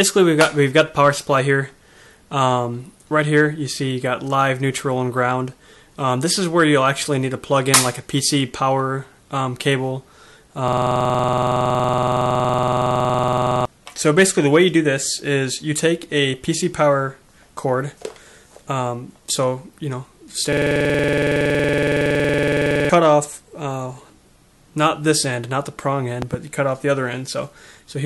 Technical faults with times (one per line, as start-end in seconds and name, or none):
10.68-13.65 system hang loop
20.53-22.89 system hang loop
26.22-26.36 loud pop